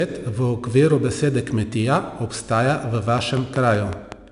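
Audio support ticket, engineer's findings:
4-bit ADPCM compression, whole clip: gritty hiss riding on every loud stretch of speech, harsher on sharp onsets where the step size lags. Spectrogram shows a hard ceiling at 10.6 kHz and a noise floor that rises with level. Rate fits roughly 89 kbps.

Train of clicks, 3.18 to 4.13 s, just after "besede kmetija obstaja v": roughly seven similar ticks at a regular 5.3 per second, peaking about 15 dB above the speech. Likely interference or a faulty connection. Shows as evenly spaced vertical broadband lines and needle spikes on the waveform.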